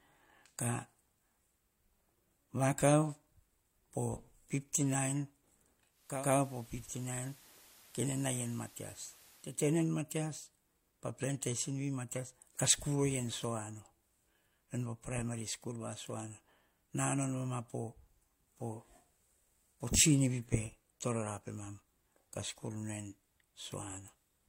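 From 5.89 s to 9.69 s there is digital radio blending to analogue. The digital signal dropped, and a 0.4 s cross-fade switched to the FM broadcast. Speech falls about 3 dB, with hiss some 20 dB beneath it. The spectrogram shows a raised noise floor.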